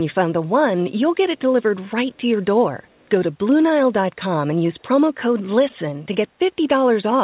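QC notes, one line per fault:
2.16–2.21 s and 3.01–3.06 s, echo leak: brief, very faint scraps of voice, well below the speech, trailing it by about 0.41 s, likely residual loudspeaker pickup sent back by an incomplete echo canceller. The fixed, long delay separates them from room reverberation, which decays continuously instead.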